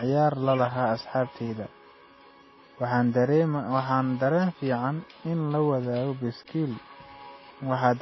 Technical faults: transcoding between lossy codecs

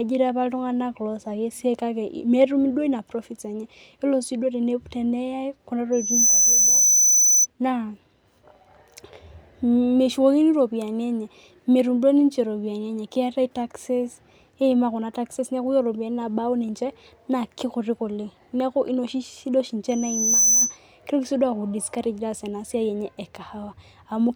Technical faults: loudspeaker feedback squeal

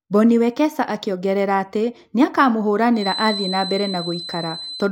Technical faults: feedback whistle

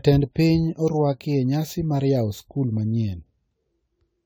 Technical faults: generation loss

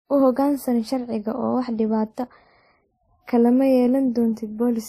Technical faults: transcoding between lossy codecs

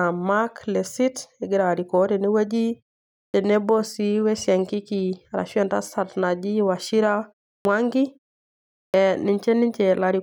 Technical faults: clipped start after a pause

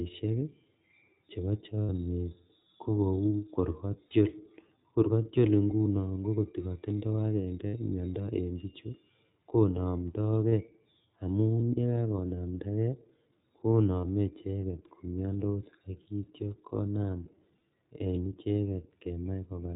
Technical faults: iLBC codec; lost iLBC frames

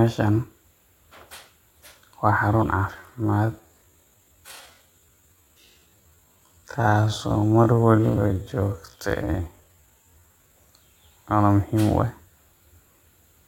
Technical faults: time-stretched section

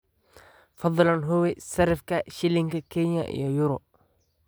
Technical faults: none

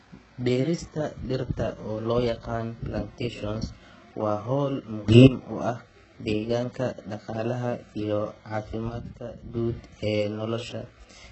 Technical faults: HE-AAC compression; sudden gain jump

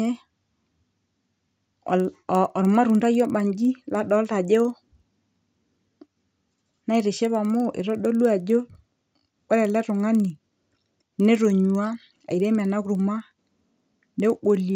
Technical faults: resampler restarted on every block

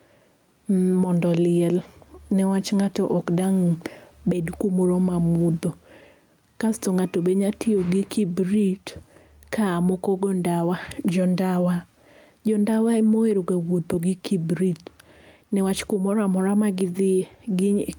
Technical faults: gain pumping

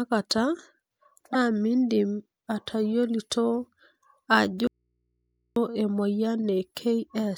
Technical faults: corrupt frame decoded; audio dropout to a faint residue

